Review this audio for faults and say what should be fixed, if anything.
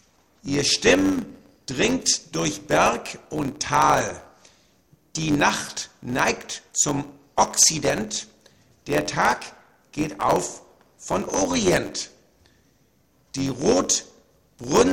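A steady buzz at about 92 Hz runs under the whole recording, and everything moves about 7% fast (1.07 times normal speed) while staying near its usual pitch. This is a block size mismatch (truncated). One stage writes blocks longer than the next stage reads, which fits 512-sample blocks being written, so the tail of every block is discarded. Each cut makes a small discontinuity, which is the buzz at the block rate, and the lost samples shorten the timeline.

To prevent it, make the writing and reading stages agree on block size, or buffer the surplus samples instead of dropping them.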